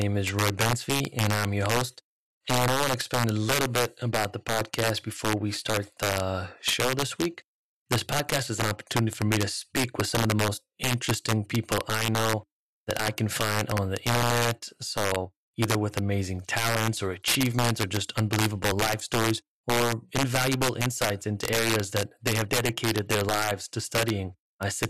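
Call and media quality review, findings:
Integer overflow, whole clip: harsh, violent cracks on the loud speech peaks, well sharper than ordinary clipping. Probable culprit is a gain or mix stage running integer math without saturation. Level is pushed about 8 dB too hot, so the top percent or two of samples exceed full scale and wrap to the opposite sign instead of being limited. Each one flips across the full range, hence the snap. Fix: clamp before conversion, or just back the gain off.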